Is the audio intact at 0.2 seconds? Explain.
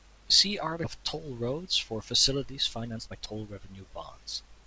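Yes, the audio is intact at 0.2 s, with no dropout, glitch or other fault at that moment.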